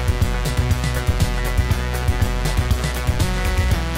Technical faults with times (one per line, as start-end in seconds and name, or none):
1.79-2.75 GSM signalling bursts
2.78-3.95 GSM phone buzz